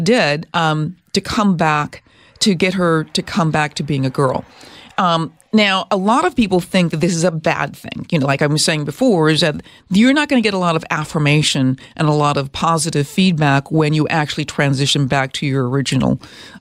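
No technical faults can be heard anywhere in this speech recording; the signal holds steady throughout.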